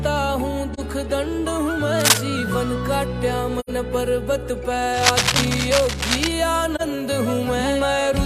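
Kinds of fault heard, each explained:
AAC frame loss with muting: at 0.73 s, 3.60 s and 6.75 s, the sound drops into short soft-edged holes of about 43 ms, 85 ms and 43 ms. These fit whole frames being lost and zeroed by the decoder, with the overlapping windows fading out and back in.
Cable scratch noise: from 1.99 to 2.20 s, and again from 4.93 to 6.33 s, dense, uneven rustling bursts appear, first a little louder than the sound and then about level with it. The likely cause is a worn cable or connector being moved.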